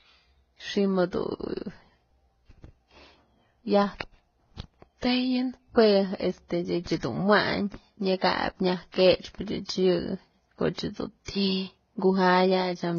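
Transcoding between lossy codecs, throughout the clip: the speech carries several kinds of coding damage at once, with nothing above 6.9 kHz. The chain likely ran from a very low-rate Vorbis encode through MP3 to a final HE-AAC stage. Each later encoder wasted bits reproducing the earlier artefacts and added its own, while the narrowest band limit survived. The result is a dull voice with layered, mismatched artefacts.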